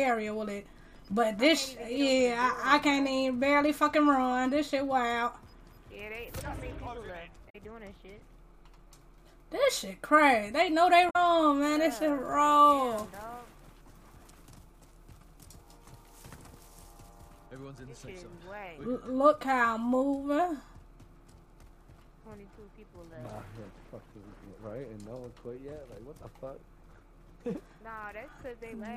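At 7.46 to 7.56 s and again at 11.06 to 11.16 s there is damaged data in the compressed stream. Corrupted frames throw the decoder out of sync, and it hunts for the next valid header. Each event is a roughly 0.1 s chirp or squawk.

From 11.62 to 17.46 s the pre-emphasis was left on. The treble boost of a CD-style 50/15 µs curve was never undone, so 10 kHz sits about 8 dB above 1 kHz. The sound turns thin, bright and sibilant for that stretch.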